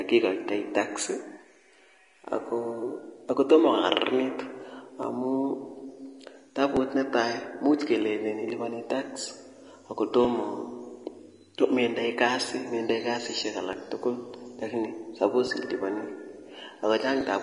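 Vorbis compression runs from the start to the end of the speech: nothing remains above 10.6 kHz, and the treble is hissy and grainy with smeared consonant attacks. This is likely coarse Vorbis quantisation, with damage plainly audible and consistent with a bitrate near 33 kbps.

Clock drift buffer slips begin at 1.55 s and recur every 1.74 s until 17.21 s, about ten regular clicks in total. They likely come from two mismatched clocks, drifting by several hundred ppm, forcing the buffer to drop or repeat a short block of roughly fifty samples each time.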